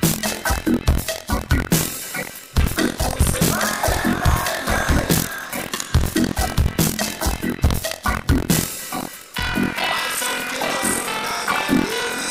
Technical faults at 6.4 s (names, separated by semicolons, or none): buffer tearing